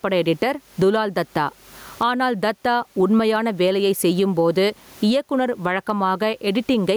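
Gain pumping runs throughout this speech recording: the room noise sits about 42 dB below the speech, and the gain swings by around 20 dB. The likely cause is microphone gain set far too high, with a fast limiter or compressor clamping down on each peak and squashing the dynamics.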